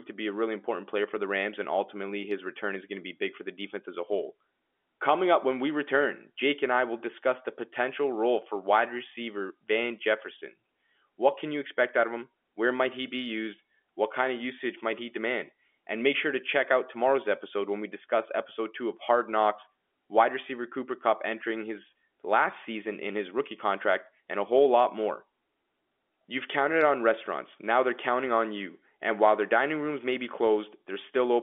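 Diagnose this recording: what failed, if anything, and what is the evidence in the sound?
Nothing failed in this recording.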